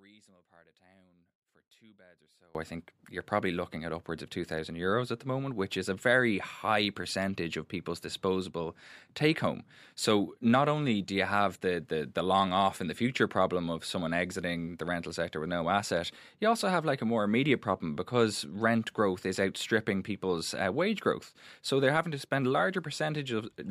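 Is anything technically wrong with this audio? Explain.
Yes, there is an audio dropout to a faint residue from the start to 2.55 s: the signal feed was likely interrupted while the path stayed live, leaving only faint sound far below normal level.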